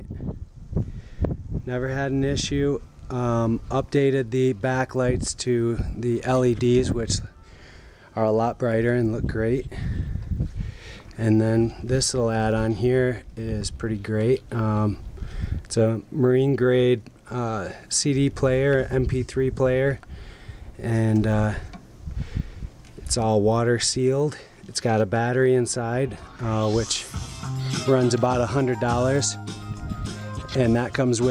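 A steady ticking runs under the audio from start to finish, repeating 25 times per second and sitting just on the edge of a low buzz, and it is present only while there is signal to carry it. This is a resampler restarted on every block: the 48 kHz to 44.1 kHz conversion handled each 40 ms block in isolation, so at every block boundary the converter lacked the true neighbouring samples and left a small error there.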